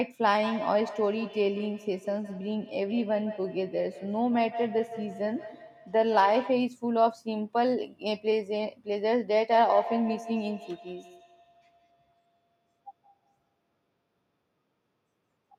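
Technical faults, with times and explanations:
0.42–6.71 s, feedback echo between two devices: the speech returns about every 150 ms, peaking at about 12 dB below the direct sound. A second device in the same room plays this microphone's signal aloud, the microphone captures it again, and neither device's echo canceller removes audio played by the other device.
9.5–13.7 s, feedback echo between two devices: the same loop recurs with about 150 ms spacing, its loudest repeats about 11 dB under the speech.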